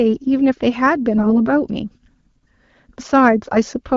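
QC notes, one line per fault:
1.16–1.42 s and 3.33–3.58 s, AMR bit errors: about 3 percent of the less-protected bits are flipped, misplacing excitation pulses. Pitch and level hold, but the speech turns hoarse and gargly.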